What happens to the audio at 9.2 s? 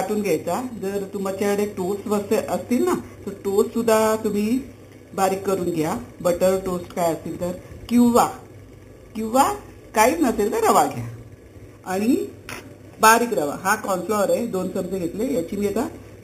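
At 9.2 s there is imaging from sample-and-hold upsampling, present throughout. An 8 kHz original was raised to 48 kHz by repeating samples unsmoothed, leaving mirror copies from 4 kHz to 8 kHz and upward, about 16 dB down: a metallic fizz following the sound's level.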